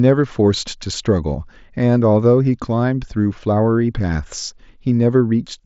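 Nothing here needs flagging: it's just speech carried over a Bluetooth headset link using mSBC, with no faults turning up at any point.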